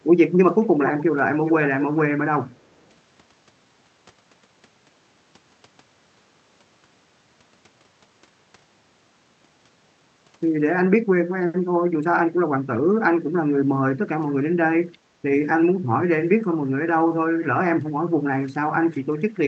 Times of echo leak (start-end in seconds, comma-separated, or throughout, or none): 0.63-1.04, 1.34-1.99, 2.50-2.89